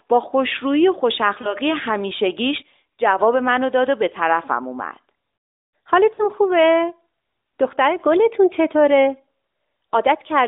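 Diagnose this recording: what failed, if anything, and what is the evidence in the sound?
A brief warble at 1.42–1.54 s and a longer, fading smear at 6.14–6.27 s: lost AMR speech frames in the network, masked by the decoder repeating earlier parameters.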